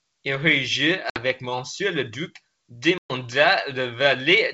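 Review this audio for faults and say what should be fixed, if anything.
Packet loss on the ADPCM call at 1.10–1.18 s and 2.98–3.14 s (about 60 and 120 ms lost) dropped packets and desynchronised the decoder's predictor, leaving hard-edged silences and slightly distorted speech as it resumes. Fix it with jitter buffering and packet-loss concealment that resets the decoder state after gaps.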